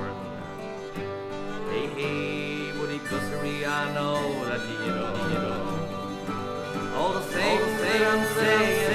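A doubled audio track runs from 5.15 s to the end: a second, equally loud, full-band copy trails by about half a second, likely from a slower duplicate capture path.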